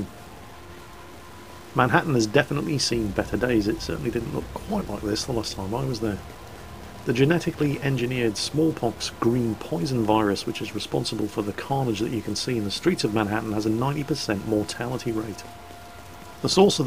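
Harsh, buzzy distortion runs through the entire sound, and quiet passages fill with grainy noise instead of falling silent. The likely cause is a stuck bit: one data bit held fixed, shifting roughly half the samples by a step of about -45 dBFS.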